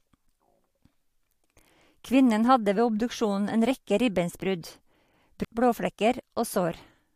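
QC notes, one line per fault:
5.44 s, stream segment skipped: the speech jumps abruptly forward with a short blip, and the flow of speech breaks without any fade or gap of silence. The likely cause is that one segment of the segmented stream failed to load, so the player dropped it and carried straight on with the next one. The join between the two non-adjacent stretches of audio is what produces the click-like discontinuity.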